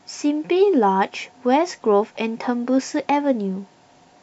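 No audible technical faults in the speech clip.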